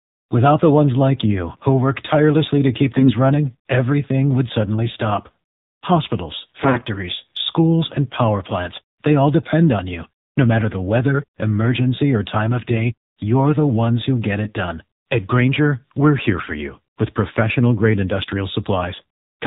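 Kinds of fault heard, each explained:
AMR narrowband mobile codec: The speech runs through the AMR-NB mobile codec at 7.4 kbps for the whole clip. It is sampled at 8 kHz and rebuilt from a vocal-tract model fed by sparse pulses, so nothing survives above 4 kHz. The damage is plainly audible as a buzzy, synthetic edge on the voice. On a spectrogram, the energy stops flat at 4 kHz, and the upper harmonics look coarse and smeared.
AMR bit errors: Two short bursts of corrupted frames, at 2.96 to 3.14 s and 6.60 to 6.85 s, with roughly a tenth of the bits flipped in the first and somewhat fewer in the second. The excitation pulses and fine parameters decode wrongly, so the voice keeps its rough pitch and loudness but turns hoarse, scratchy and gargly. A spectrogram shows broken, noisy harmonics in those spans, and the waveform shows irregular, ragged cycles at the same level.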